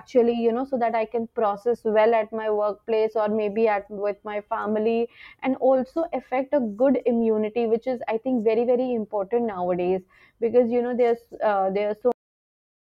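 Right at 12.12 s the speech just stops dead, and that's a classic cut-off end. The final stretch of audio never got written out or played, so the sound gets chopped mid-utterance instead of finishing naturally. There's no tail or decay at all. It falls straight into digital silence, and that silence runs for the last three-quarters of a second or so. It sounds like someone yanked the cable rather than letting the talker wrap up.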